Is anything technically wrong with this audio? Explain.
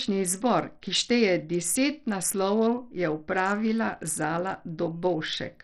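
Yes. Throughout the speech the treble flickers and drops away, and a gritty, aliased noise rides on the sound, likely Bluetooth SBC compression. Its coarse, fixed-band quantisation, heavy here and fitting a bitrate near 64 kbps, gives this grit, unlike the smoother swirling of perceptual codecs.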